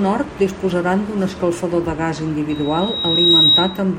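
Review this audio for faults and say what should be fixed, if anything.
Loudspeaker feedback squeal runs from 2.49 to 3.83 s, just after "d'un escalfador de gas": the microphone picks up its own loudspeaker, and a single 3.8 kHz tone swells over about three quarters of a second to roughly 10 dB above the speech. Prevent it by lowering monitor gain, moving the microphone out of the loudspeaker's coverage, or notching 3.8 kHz.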